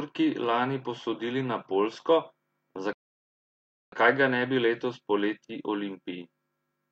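A speech clip with a rebuffering stall: at 2.93 s the sound cuts to silence and resumes at 3.92 s exactly where it stopped, adding about a second. Unlike a dropout, no speech is skipped; the player simply waited for more downloaded audio.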